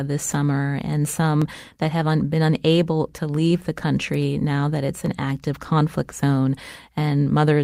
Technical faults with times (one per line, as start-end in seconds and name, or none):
0.35 dropped samples
1.42 dropped samples
5.06 dropped samples
6.09-6.11 lost packet rebuilt from error correction